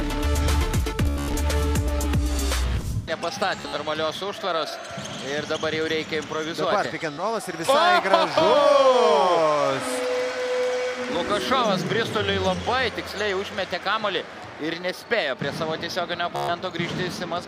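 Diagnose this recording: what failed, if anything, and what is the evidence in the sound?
The Bluetooth link failed, producing Bluetooth stutter at 1.06–1.35 s, 3.56–3.77 s, 7.13–7.23 s and 16.36–16.51 s. Each shows a short slice of audio repeating as a rapid buzz before the sound jumps ahead. The first burst drops about 224 ms scattered over 280 ms, with the longest unbroken run about 98 ms. Packets arrived late or not at all, so the receiver replayed its last buffer until fresh data came.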